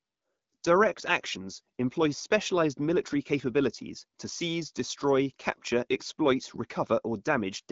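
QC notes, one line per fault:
No faults found.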